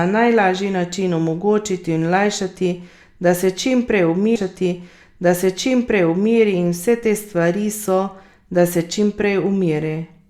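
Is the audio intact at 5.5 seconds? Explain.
No. At 5.5 seconds the clip is inside a stream segment repeated fault running from 4.35 to 6.35 s. The player fetched or queued the same chunk of the stream twice, so a two-second stretch of speech that had already played is fed out again, adding 2 s to the timeline. A listener hears a small blip where playback jumps back, followed by the same speech replaying before the programme moves on.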